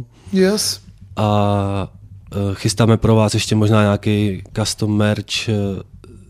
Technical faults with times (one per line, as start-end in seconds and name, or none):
none